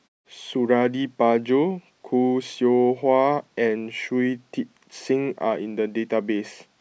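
No technical faults are audible in this speech recording, and the background falling to silence in the pauses, with each phrase returning in time, is normal behaviour of the output.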